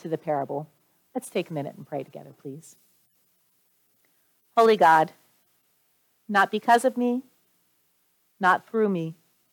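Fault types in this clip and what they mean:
No technical faults are audible.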